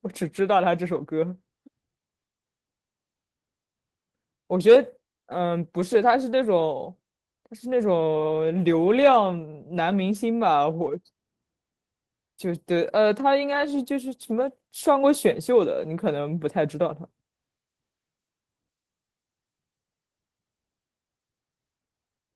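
Nothing in the recording stood out as a technical problem on listening.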